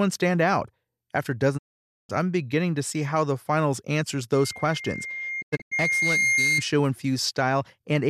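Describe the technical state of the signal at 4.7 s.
At 4.7 s the signal is in the middle of a loudspeaker feedback squeal. It begins at 4.33 s, just after "how the finals answers", and lasts until 6.65 s. The microphone is picking up its own loudspeaker, and at 2.1 kHz the loop gain exceeds one, so that frequency feeds on itself. Unlike a steady interfering tone or hum, it swells over roughly two seconds until it is about as loud as the speech.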